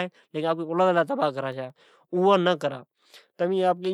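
From 1.52 to 2.05 s, CD scratch ticks: four brief clicks, each under about 2 ms, where disc damage exceeded error correction and the player concealed the lost samples.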